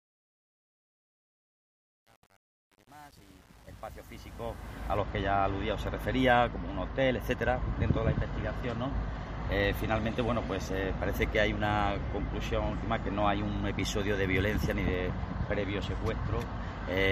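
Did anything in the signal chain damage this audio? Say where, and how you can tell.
Yes. A digital gain stage in the sample-format conversion truncated the fade-in to 8 bits without dither, causing truncation distortion on the fade from 0.0 to 4.97 s. At low levels the waveform collapses into coarse steps, so the quiet opening sounds gritty.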